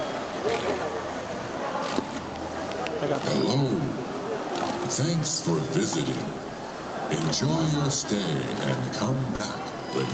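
At 9.35 to 9.41 s there is a short concealed packet loss: about 40 ms of audio failed to reach the decoder in time, and the receiver covered the gap with 40 ms of synthesized fill, extrapolating from the sound just before the hole and then crossfading back into the real signal. To the ear this comes across as a brief smear or wobble near the end of the clip, where a fleeting detail of the sound is blurred or dropped.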